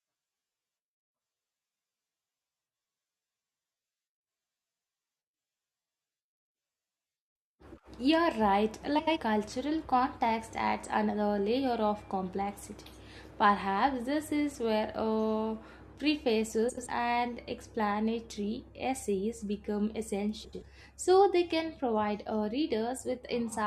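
At 6.95, 8.98, 16.69 and 20.44 s the speech has frames out of order. Adjacent blocks of 43 ms (first event) or 85 ms swap places, producing a brief garbled flutter but no lost time.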